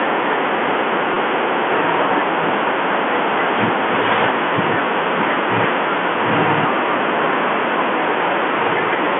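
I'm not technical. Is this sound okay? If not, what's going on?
No. At about 1.14 to 1.16 s there is a brief dropout called packet loss with pitch repetition. Roughly 20 ms of the audio went missing in transit, which fits two small packets. The receiver filled the hole by repeating the last stretch of the speech's pitch, so you hear a tiny held, slightly buzzy blip. The thin, telephone-like sound throughout comes from standard G.711 telephone coding, not from this fault.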